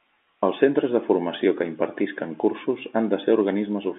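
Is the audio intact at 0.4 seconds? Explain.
Yes, the speech at 0.4 s is intact, with nothing breaking up the G.711 telephone coding at that point.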